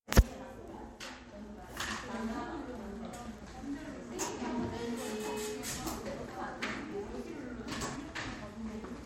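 At 4.28 s and again at 6.92 s the audio jumps abruptly forward, with no gap of silence, skipping roughly 20 ms of sound each time. This is likely a dropped buffer (overrun), where incoming samples were overwritten before being read, splicing the surrounding audio together.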